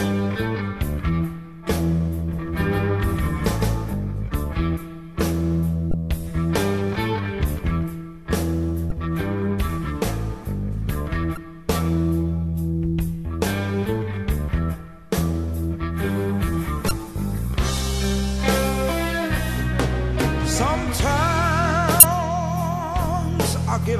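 A second copy of the audio, most likely from a slower capture path or an edit holding two copies out of step, is mixed in from 2.33 to 3.93 s. This is a doubled audio track: a dry, full-band repeat roughly 150 ms behind and about as loud as the original, starting and stopping abruptly. Damaged data in a compressed stream, where corrupted bytes make the decoder misread or reject frames and lose sync, breaks the sound five times, each for about 35 ms, at 5.91, 8.88, 11.34, 16.88 and 22.00 s, as short decoding glitches while the decoder hunts for the next valid frame.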